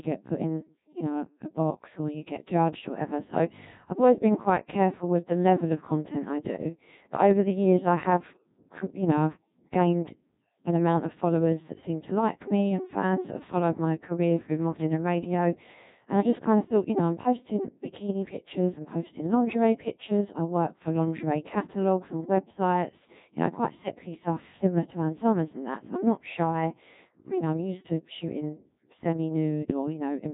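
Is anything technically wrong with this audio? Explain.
Yes. The speech has passed through a Codec 2 vocoder for its whole length, with heavy damage. Codec 2 discards the waveform and sends only pitch, voicing, energy and a coarse spectral envelope, which the decoder rebuilds from sine waves. The result is robotic and buzzy, and the coarseness points to a rate near 1.6 kbit/s. On a spectrogram the harmonics look unnaturally regular and smeared, with blurred formants. The waveform no longer matches natural speech shape.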